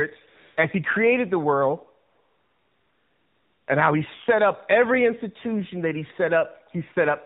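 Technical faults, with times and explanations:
Throughout: AMR narrowband mobile codec. Nothing above 4 kHz comes through, and the speech sounds buzzy and synthetic, which fits a low AMR-NB rate of about 7.4 kbps.
0.28 to 0.58 s and 2.10 to 3.68 s: AMR comfort noise. The phone stopped sending speech frames, so smooth synthetic hiss replaces the real background and switches in and out.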